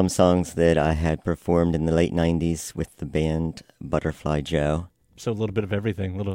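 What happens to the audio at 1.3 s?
Nothing goes wrong at 1.3 s; the speech runs on continuously there with no dropout, click or distortion to be heard.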